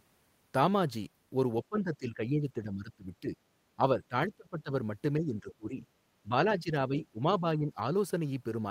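Speech. The voice ducks at 1.69–3.37, 3.76–4.71, 5.2–5.75, 6.23–6.37, 6.55–7.2 and 7.4–7.84 s, by roughly 10 to 25 dB. This is likely speech suppressed in double talk, with an echo canceller turning down both the voice and the loudspeaker echo.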